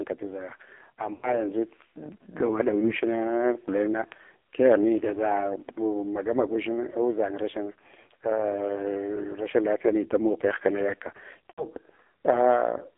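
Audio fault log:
Throughout: AMR narrowband mobile codec. The sound is confined to roughly 300 Hz to 3.6 kHz, and the voice has a heavily buzzy, synthetic edge, which fits AMR-NB at a low rate near 5.9 kbps. A plain band-limited line would stay clean inside its band. Here the pulse-driven vocal-tract model itself coarsens the speech.
1.14–1.39 s, 2.80–2.93 s, 11.50–11.65 s: lost AMR speech frames. At 2.80 s there is a brief warble. The other two gaps sound drawn out and smeared, then fade, which points to about four consecutive frames lost. The decoder repeats its last pitch and vocal-tract settings at falling gain, so the sound stretches and decays. A hard dropout would cut off abruptly instead.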